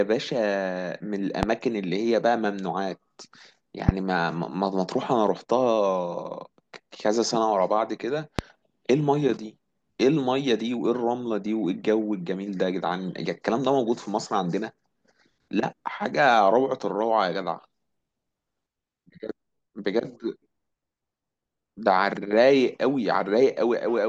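Three loud pops sit on the speech, at 1.43 to 1.45 s, 3.89 to 3.91 s and 8.39 to 8.41 s. Each is a single sharp hit lasting about 20 ms. Each peaks around 20 dB above the speech. The speech carries on underneath without a break. The likely cause is a brief voltage step or spike entering the signal chain, from a switch, static or a driver glitch. The circuits that follow shape it into a short, hard thump.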